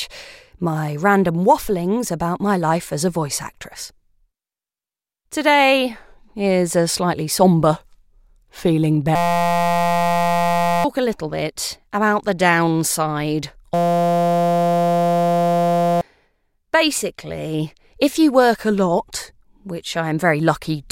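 A steady buzz at about 172 Hz replaces the speech from 9.16 to 10.84 s and again from 13.74 to 16.01 s. This is a system hang loop: the system froze while the hardware kept replaying one 5.8 ms slice, which fits a 256-sample buffer. About one and a half seconds and then two seconds of speech are lost.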